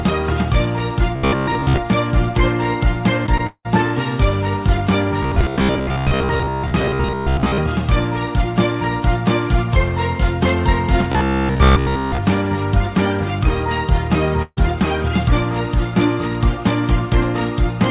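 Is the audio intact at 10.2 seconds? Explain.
Yes, the audio is intact at 10.2 seconds: nothing breaks up, drops out or distorts there, and what remains is the ordinary narrow-band sound of the call path, with nothing above 4 kHz.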